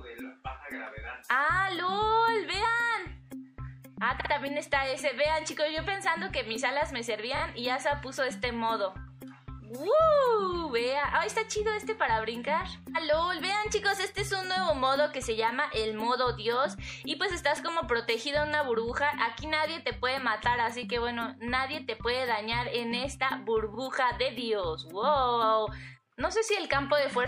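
The whole thing has a watery, swirly quality, with a dulled top end and a metallic chirp on the brighter, noisier parts. That's the signature of likely MP3 compression at a low rate, something around 64 kbps. With that few bits the encoder chops the treble and lets quieter frequency components blink in and out frame to frame, and attacks smear. There are also two stutters from repeated frames. From 4.20 to 4.30 s, a 52 ms chunk (which fits two MP3 frames) plays twice more than it should, adding about 0.1 s. At 7.36 s, a shorter 26 ms chunk, about one frame's worth, also plays twice extra and adds 52 ms. The clip runs longer by the repeated time.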